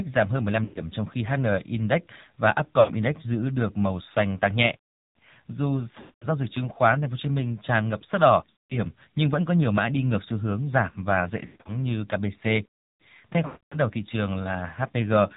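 Speech carried over the AMR narrowband mobile codec at 7.4 kbps, with nothing above 4 kHz and a buzzy, synthetic vocal quality rather than the plain muffling of simple low-pass filtering. Lost AMR speech frames occur at 0.64, 2.80, 6.00, 8.50, 11.46 and 13.46 s, each lasting 0.08 to 0.26 s. The decoder drags out the last sound and fades it, unlike the abrupt silence of a plain dropout.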